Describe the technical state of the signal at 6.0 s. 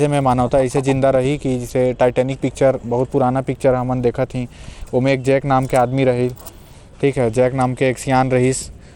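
At 6.0 s the speech carries the same damage heard across the whole clip, most likely Bluetooth SBC compression. The codec splits the signal into a few wide sub-bands and, short of bits, starves the weak upper bands, so the treble flickers while gritty quantisation noise and aliasing sit on the sound, plainly audible and consistent with a stream near 96 kbps. Unlike a perceptual codec's swirly artefacts, this grit follows band edges, and content still reaches 19.5 kHz.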